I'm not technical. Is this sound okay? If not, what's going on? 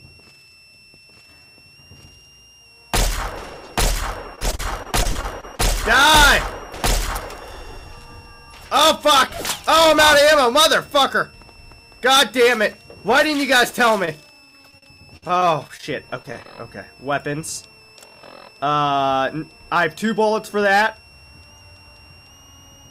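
No. A switching power supply in the equipment is running in an audible range, so a faint, high switching supply whistle, around 2.6 to 2.9 kHz, sits behind the sound for the whole clip. Its pitch wanders slightly within that range.

Repeated packet loss (robotic sound) happens twice, from 4.35 to 5.61 s and from 14.05 to 16.46 s. Small chunks of audio went missing in transit, each lasting up to about 40 to 50 ms. The system patched each hole by stretching the last bit of sound, which makes those stretches choppy.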